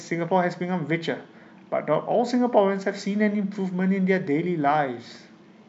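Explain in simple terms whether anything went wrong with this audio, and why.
Nothing went wrong with this recording. The speech comes through steadily, with no dropouts, clicks or glitches anywhere to point to.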